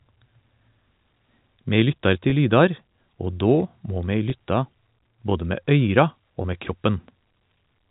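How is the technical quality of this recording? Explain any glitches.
The recording has three brief glitches, all packet loss with pitch repetition, carried over a G.711 A-law telephone channel that cuts everything above 4 kHz.

Packet loss with pitch repetition occurs at 2.30 to 2.32 s, 4.30 to 4.32 s and 6.42 to 6.44 s. Each gap is 20 ms, which points to a single lost packet. The receiver fills it by repeating the last pitch cycle, so each one sounds like a slightly held, buzzy moment in the speech.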